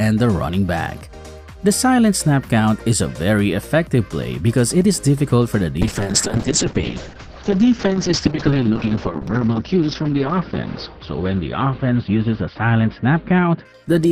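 From 5.82 s to the end there's a call bitrate drop. The top end collapses from about 20 kHz to 6 kHz, and the sound turns coarse and watery, which fits the encoder falling from around 96 kbps to about 7 kbps for the last 4.6 s or so.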